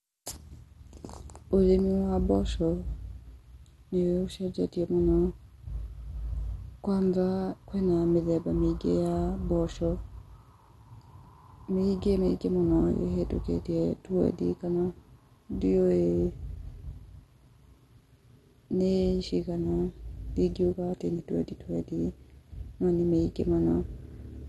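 From start to finish the speech sounds dull and plainly gurgly, with a granular edge and nothing above 12.2 kHz. That's likely MP2 compression starved of bits, which fits something around 64 kbps, with upper sub-bands dropping out and the rest coarsely quantised.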